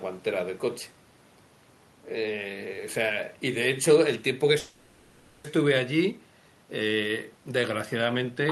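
Packet delivery on this speech clip likely stalled at 4.59 s, letting the receiver's jitter buffer run dry and producing a call audio freeze that lasts until 5.46 s. With nothing new to play, the receiver stretches the last sound into a fading buzzy hiss for about 850 ms, with no true silence. When packets resume, speech picks up exactly where it stopped, so nothing is lost, but everything afterwards arrives about 850 ms late.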